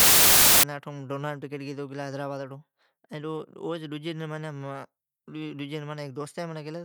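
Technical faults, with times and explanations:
0.00 to 0.63 s, samples built from the wrong bytes: the opening of the speech turns into loud, dense broadband noise. Each sample was assembled with its bytes misordered or misaligned, so the rapidly fluctuating low bits dominate.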